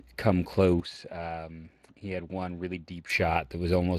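It's a short speech clip, and the Speex codec is audible all the way through: the speech has that grainy, hoarse CELP texture you get when the excitation isn't coded very finely, and nothing comes through above about 15.3 kHz. The amount of damage fits a setting around 22 kbps. From 0.8 s to 3.1 s the sound turns duller, with the top end now stopping at about 11.4 kHz. It also drops roughly 5 dB in level, and a faint new background noise comes in, far below the speech. The change happens without any gap, and at 3.1 s the fuller sound returns. That stretch is likely an input switched to a poorer device, such as another mic or a headset on its call profile, which would bring its own narrower band, level and noise floor.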